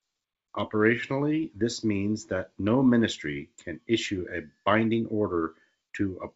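No technical faults can be heard in this speech clip. It carries the wideband bandwidth of G.722 telephone coding, reaching up to about 7 kHz, with at most a faint trace of the coding in the upper band.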